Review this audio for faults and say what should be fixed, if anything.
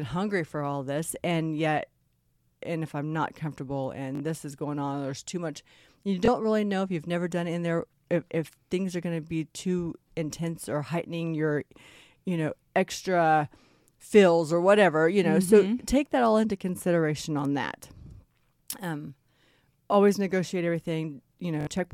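Bluetooth stutter shows up three times in the speech: 4.15–4.20 s, 6.26–6.28 s and 21.61–21.67 s. The receiver replayed its last short slice while data was missing, giving roughly 40, 20 and 60 ms gaps, consistent with two, one and three dropped packets. To prevent it, record over a wired link or keep the Bluetooth devices close and clear of interference.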